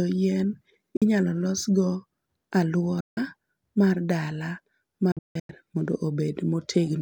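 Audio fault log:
0.97 to 5.50 s, Bluetooth dropout: speech cuts to silence three times with sharp edges and resumes further on, as if it had kept playing. The holes are at 0.97 s (46 ms), 3.00 to 3.18 s (163 ms), and 5.12 to 5.50 s, where 302 ms of silence is split into several gaps, the longest 163 ms. The likely cause is wireless packets arriving too late at the headphones and being discarded.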